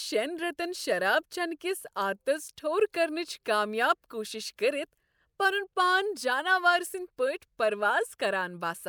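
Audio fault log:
No fault is heard in this speech.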